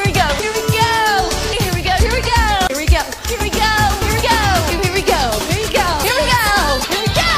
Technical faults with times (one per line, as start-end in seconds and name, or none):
2.67-2.70 CD skip
4.14-4.19 damaged data in a compressed stream